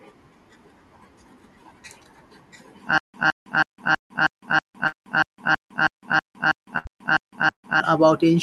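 From 2.98 s to 7.80 s the speech falls into a stutter with silent gaps: a roughly 164 ms fragment plays, then about 159 ms of dead digital silence, repeating every 322 ms, 15 times in all. That regular loop-and-stop is the sound of playback stalling and retrying on the same chunk, likely a starved player or stream buffer. Whatever speech should have filled those 4.8 seconds is simply gone.

Layered inside that stretch are four bursts of packet loss, at 3.97 to 4.12 s, 4.87 to 4.95 s, 6.78 to 6.88 s and 7.51 to 7.65 s. At each one, audio failed to arrive in time, and the receiver smeared the last bit of sound forward to cover the hole before the speech picks up again further along. The first and last drop about 120 ms and trail into near-silence for around 90 to 110 ms, while the middle two drop about 60 ms and are shorter blips.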